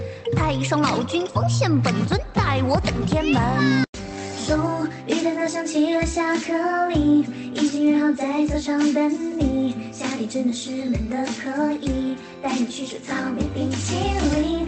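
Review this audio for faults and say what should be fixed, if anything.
No faults found; nothing to fix.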